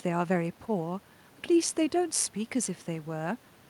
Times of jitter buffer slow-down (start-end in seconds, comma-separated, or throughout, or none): none